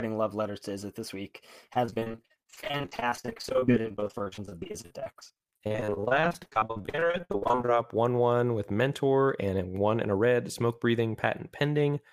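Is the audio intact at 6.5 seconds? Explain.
No. From 1.73 to 7.70 s the speech sounds choppy and robotic: repeated packet loss leaves frequent short holes, each filled by stretching the last sound.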